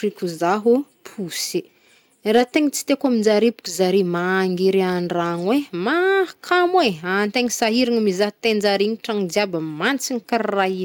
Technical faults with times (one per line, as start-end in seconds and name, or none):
2.31-2.90 hard clipping
7.36-7.68 hard clipping
9.86-9.90 hard clipping